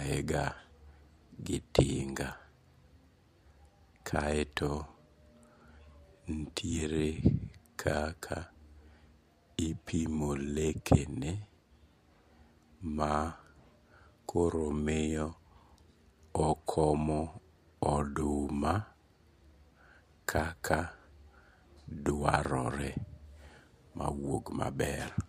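Nothing stood out as a technical fault on listening through this recording.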